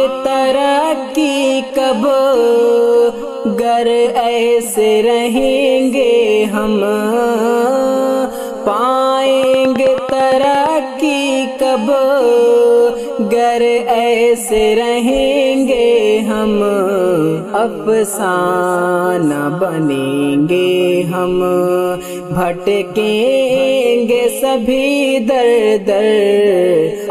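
A train of clicks runs from 9.43 to 10.67 s in the audio: about ten evenly spaced ticks at roughly 9 per second, well above the sound, likely from electrical interference.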